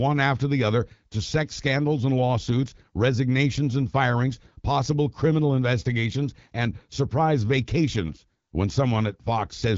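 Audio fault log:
No faults are present in this speech recording. The AMR wideband (HD Voice) codec path can be heard in the band ending near 7.5 kHz and in the light coding texture, which fits a rate of about 12.65 kbit/s.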